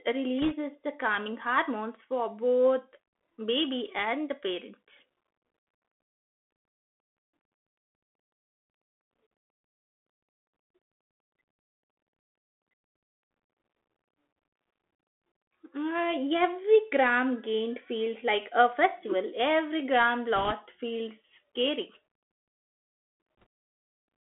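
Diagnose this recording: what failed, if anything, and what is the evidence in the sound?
Bluetooth CVSD headset codec, throughout, at the codec stage. The audio is confined to roughly 250 Hz to 3.4 kHz, with plainly audible granular hiss and roughened sibilants. The one-bit-per-sample up/down coding, with an adaptive step that lags fast high-frequency changes, fits a 64 kbit/s CVSD link.

Bit errors on a Bluetooth voice link, at the radio-link stage, occur at 0.42 to 0.54 s just before "the calming hormones for", at 20.36 to 20.53 s before "feels scary", and at 23.40 to 23.44 s. Each is a brief rushing crackle without sharp clicks. That fits an error rate of about 1.5 to 2 percent, since every flipped CVSD bit shifts the signal by one step, whose size grows with the speech level, and the error quickly decays.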